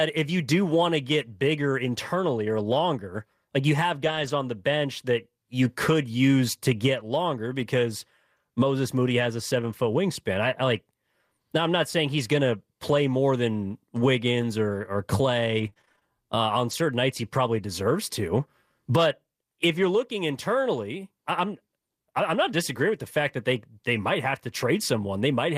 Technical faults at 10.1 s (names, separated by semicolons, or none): none